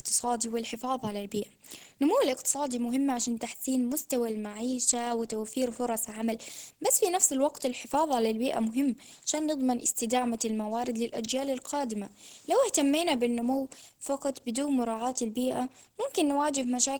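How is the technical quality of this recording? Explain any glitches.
The recording is plainly degraded from start to finish: the speech sounds hoarse, rough and grainy, with a noisy texture instead of clean detail, even though high frequencies still reach up to about 20.1 kHz. This is likely Opus compression at a low rate, which fits roughly 16 kbps in hybrid mode. Too few bits are shared across the spectrum, so the codec rebuilds fine detail approximately, leaving the harsh, grainy quality heard throughout.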